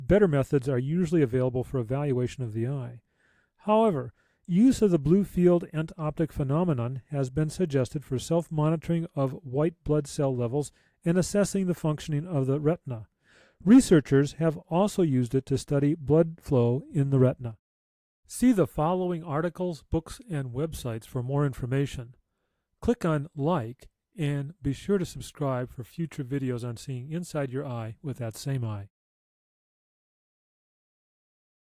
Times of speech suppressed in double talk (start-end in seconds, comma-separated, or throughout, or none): none